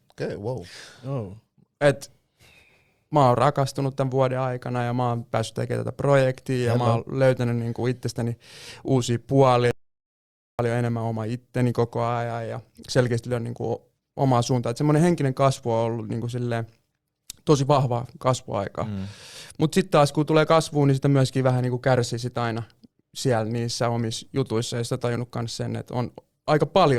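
An audio dropout to silence runs from 9.71 to 10.59 s: the speech cuts off abruptly and roughly 0.88 s of silence follows, with no room tone, before it resumes mid-flow. The input was likely lost briefly while recording continued writing silence.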